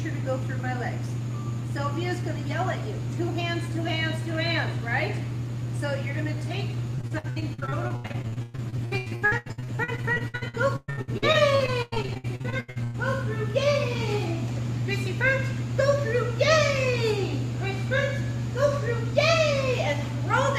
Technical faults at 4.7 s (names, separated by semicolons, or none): none